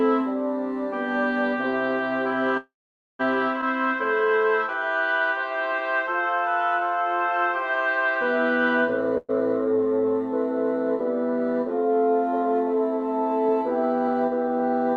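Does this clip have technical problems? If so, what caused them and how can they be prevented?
Yes. Call audio freeze at 2.57 to 3.21 s and 9.18 to 9.31 s: the sound stalls, with a fading continuation of the last sound for 618 ms (480 ms of it silent) and then 111 ms. This is likely packets held up in transit that drained the jitter buffer. Playback then resumes where it stopped, so nothing is lost but the delay grows. Preventing this needs a steadier network path with less congestion, or prioritised traffic (QoS) for the call.

Skip ahead at 3.61 to 3.64 s: playback jumps forward, cutting out about a fifth of a second of audio and joining the two sides almost directly. This fits the buffer discarding backlog after the first freeze, or a stretch lost in transit. A jitter buffer that sheds excess delay gradually, rather than by dropping audio, would prevent this.

Jitter buffer slow-down at 5.49 to 7.16 s: the audio plays at 89% speed at unchanged pitch, stretched by 191 ms through repeated single pitch periods. 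Sounds are drawn out while the buffer rebuilds its reserve. More stable packet timing would reduce how often the buffer needs to refill this way.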